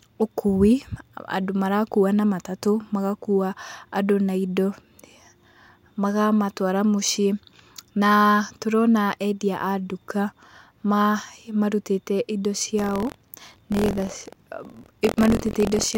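From 12.77 s until the end of the clip, the speech takes on a robotic rattle at about 43 Hz, which is buffer tearing. The writer and the playback hardware have drifted out of step, so every period of the ring buffer carries a short slice, around a twentieth of it, of sound from roughly 50 ms earlier. The repeat rate fits a 1024-sample buffer. On a waveform, hard discontinuities recur every 23 ms, and a spectrogram shows matching thin vertical lines wherever speech is present.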